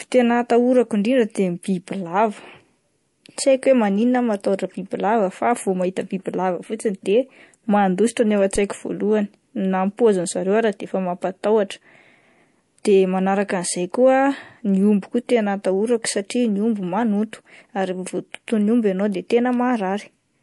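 From the start of the speech to the end, the sound is watery and swirly, with sibilants breaking into metallic chirps and consonant attacks smeared. The likely cause is MP3 compression at a low bitrate, which fits something around 48 kbps. Short of bits, the encoder has dropped everything above 11.3 kHz and let weak frequency lines flicker on and off between frames. On a spectrogram this shows as a hard ceiling at 11.3 kHz, with patchy, blocky holes in the upper bands.

Right after "mandositra no ao", from 8.56 to 8.63 s, there is a phantom power thump: a supply switched on or off on a live input, and the sudden voltage step passed through the coupling capacitors as a deep low-frequency jolt. It dies away quickly, decaying over about 16 ms. In the waveform it appears as a one-sided swing that relaxes back to centre. On a spectrogram it is a brief vertical smear concentrated at the bottom.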